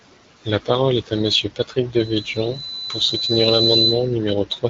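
AMR bit errors hit the speech from 2.42 to 2.58 s. Over that short stretch the weakly protected bits of the coded frames arrived corrupted, at a rate of roughly one bit in twenty, but the check on the critical bits still passed, so the decoder used them. The excitation pulses fell in the wrong positions, and the fine pitch, gain and spectral values drifted. The level and pitch hold roughly steady while the sound turns hoarse, scratchy and gargly. The span fits about eight 20 ms frames. The surrounding wideband coding, which sounds like AMR-WB at around 12.65 kbit/s, adds only light damage.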